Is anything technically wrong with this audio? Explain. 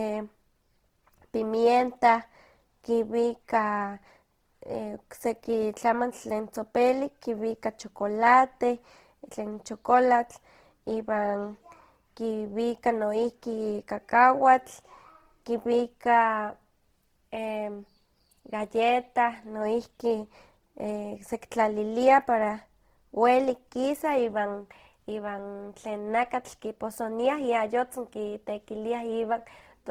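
Yes. All the way through, the speech carries audible Opus compression damage. The likely cause is a low-bitrate encode in Opus's CELT music mode, around 16 kbps. Starved bands get refilled from folded lower bands or noise, so it sounds grainy and rough while keeping its full bandwidth.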